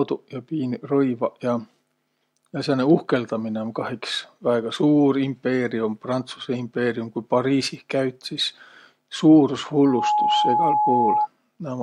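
A speech recording with loudspeaker feedback squeal: from 9.78 to 11.28 s a steady 842 Hz tone swells within about a third of a second to roughly 5 dB above the speech. The microphone is picking up its own loudspeaker, and at that frequency the loop gain exceeds one.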